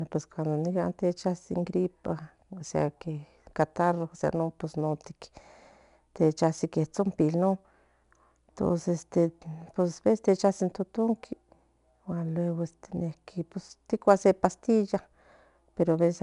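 From start to finish the speech carries a gritty hiss that rises and falls with the voice, loudest on the strongest syllables, with a rough edge on sharp consonant attacks, and nothing above about 10.6 kHz. This is plainly audible 4-bit ADPCM compression: each sample is coded as a small step from a prediction, so the coding error tracks the signal level, and the step size cannot grow quickly enough for sudden onsets. The missing top fits a low sample rate and a bitrate around 89 kbps.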